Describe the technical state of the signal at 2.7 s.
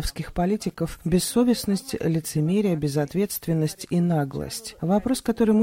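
The signal at 2.7 s is intact, with no technical fault at that moment.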